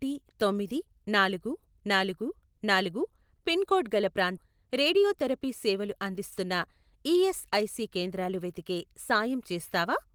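At 4.37 to 4.39 s the speech makes a skip ahead: about 400 ms of audio was discarded while later audio was already queued, so playback jumps forward with no gap. On a spectrogram, formant tracks break and resume elsewhere; the waveform shows an abrupt splice.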